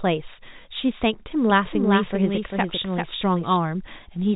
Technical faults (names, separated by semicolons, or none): doubled audio track